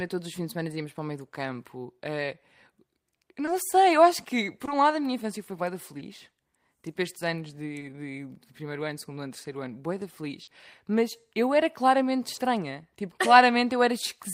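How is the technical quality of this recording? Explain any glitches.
The recording has six short concealed packet losses: at 3.45 s just before "sei eu acho que", 4.65 s, 5.97 s, 7.79 s, 10.43 s right after "ano terceiro ano boeda", and 12.35 s after "eu era claramente". About 20 ms of audio went missing each time, 40 ms at 10.43 s. The receiver extended the last sound over each gap and then faded back in, so you get a quick smear or wobble, a bit longer at 10.43 s.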